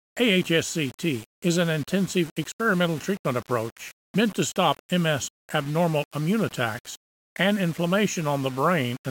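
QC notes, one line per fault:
Throughout, low bit depth without dither: the audio was likely rounded to about 6 bits with no dither, so the error tracks the sound, leaving grainy distortion only about 20 dB down that thickens on quiet passages, where the faintest detail sputters between steps or drops out.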